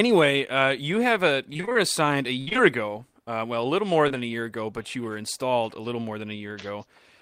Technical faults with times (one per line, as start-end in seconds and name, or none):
1.53-1.77 repeated packet loss (robotic sound)
2.41-2.60 repeated packet loss (robotic sound)
4.08-4.12 short concealed packet loss